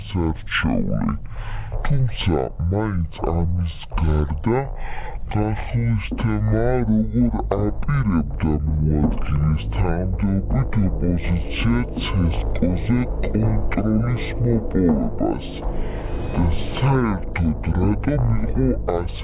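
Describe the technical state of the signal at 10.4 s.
At 10.4 s the whole recording suffers from a wrong sample rate: it plays at half speed and a full octave (12 semitones) low, which fits 16 kHz material read out at 8 kHz. On a spectrogram, everything is stretched in time and squeezed down in frequency by half.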